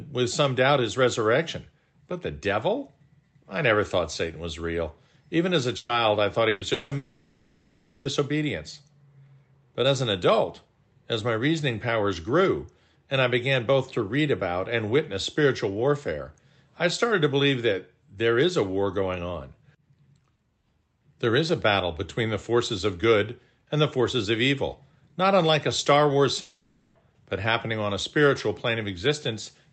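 At 5.77 to 5.92 s, just after "as a", and again at 6.49 to 6.64 s, after "I thought", there is a burst of packet loss. About 120 ms of audio is missing each time. The receiver carries the last sound forward as a fading buzz or hiss, then resumes further on.

Gaps at 6.73 to 6.94 s, 6.97 to 8.08 s and 26.41 to 26.98 s (ending before "but happening on a") likely come from a long network dropout. About 180 ms, 1.08 s and 540 ms are lost, and the concealed tone decays through each gap rather than falling to silence. Throughout, the Opus call path limits the audio to below 8 kHz.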